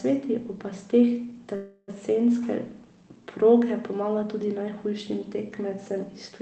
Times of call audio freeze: 1.55-1.90

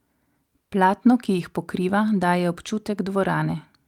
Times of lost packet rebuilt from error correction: 1.37-1.39

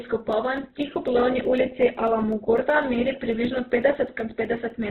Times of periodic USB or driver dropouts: 0.08-4.83

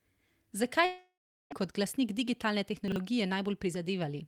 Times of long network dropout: 0.85-1.53

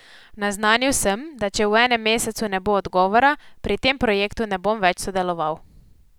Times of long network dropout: none

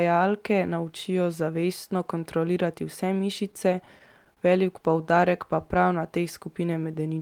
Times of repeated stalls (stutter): 3.51-4.40

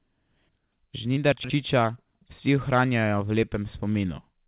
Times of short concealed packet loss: 1.14-1.18

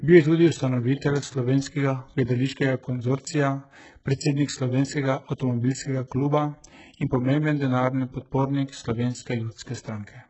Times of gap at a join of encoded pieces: none

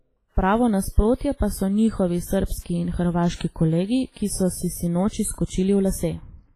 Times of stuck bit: none

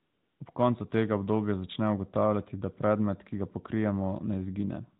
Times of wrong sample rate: none

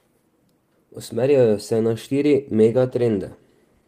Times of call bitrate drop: 2.64-3.87

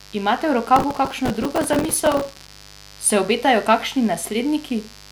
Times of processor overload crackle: 0.76-2.52

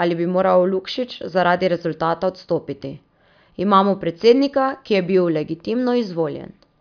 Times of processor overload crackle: none

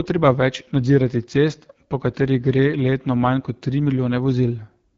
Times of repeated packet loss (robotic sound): none

